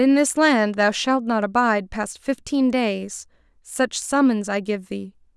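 No technical faults can be heard anywhere in the recording; the speech signal stays intact and continuous throughout.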